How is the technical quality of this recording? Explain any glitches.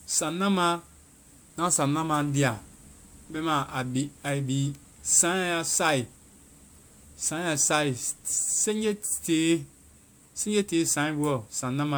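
The recording's quality is degraded throughout by a single fault. Generation loss affects the whole clip, with the speech sounding swirly, smeared and hollow and its attacks blurred. The likely cause is around five passes through a lossy codec, consistent with MP3 at 128 kbit/s. Each re-encode requantises on a shifted frame grid, so noise and spectral holes accumulate. A spectrogram would show patchy, flickering gaps and smeared onsets, with no content above 20.1 kHz.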